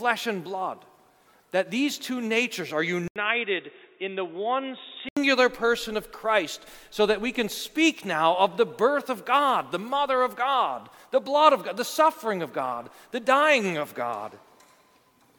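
At 3.08 s the sound drops out for about 80 ms, then returns dull and boxy, with nothing above 3.8 kHz and a few decibels quieter, over a faint new noise floor. This most likely reflects the input switching to a poorer device, such as a headset's call profile, until 5.17 s. On a spectrogram the upper band is cleanly cut away across that span after a thin vertical gap; the waveform shows the brief flat gap and a slightly lower envelope.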